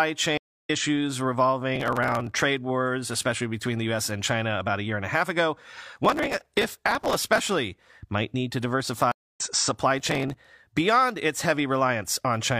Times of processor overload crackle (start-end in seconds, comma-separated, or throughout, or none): 1.76-2.42, 5.95-7.49, 9.99-10.47